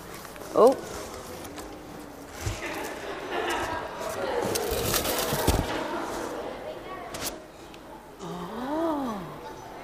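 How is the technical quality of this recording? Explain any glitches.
No glitches can be heard anywhere in the recording. The sound continues without any audible break or disturbance.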